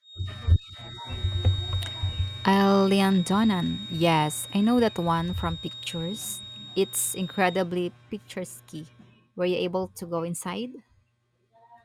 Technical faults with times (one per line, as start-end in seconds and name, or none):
0.00-7.70 feedback whistle